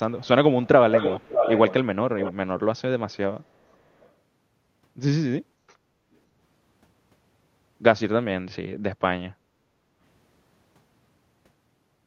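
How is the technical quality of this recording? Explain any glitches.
The recording has two kinds of fault: a leaking echo early in the speech and two dips in the room sound later on.

Echo leak: a delayed copy of the speech is heard at 0.18–0.28, 0.63–0.68, 0.93–1.74, 2.19–2.33, 3.71–3.77 and 4.00–4.08 s. It trails by roughly 450 ms in the first two and 560 ms afterwards. It is likely an unremoved loudspeaker pickup. At 0.93 s it is as loud as the speech, then it fades to faint scraps. On a spectrogram it looks like shifted, ghostly repeats of the speech harmonics.

Background gated by the echo canceller: the room tone drops at 5.79–6.04 s by about 13 dB and at 9.33–9.97 s by about 9 dB. The canceller clamped the microphone during playback, so the ambience briefly vanishes. The waveform and spectrogram show a darker, lower noise floor there.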